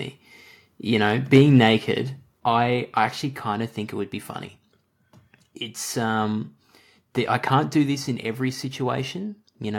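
From 1.34 to 1.58 s the loudest speech peaks run about 4 dB past the converter's limit. This is microphone overload, likely from input gain set too high. A small share of samples are flattened, giving a harsh crackle. The waveform shows squared-off tops, and the spectrogram shows smeared broadband energy above the voice.

The microphone volume is stepped down three times: at 1.38 s by about 2 dB, at 2.4 s by about 4 dB, and at 7.86 s by about 2 dB. These are likely automatic gain reductions by the call software. Speech and background drop together, and the waveform envelope narrows abruptly at each point.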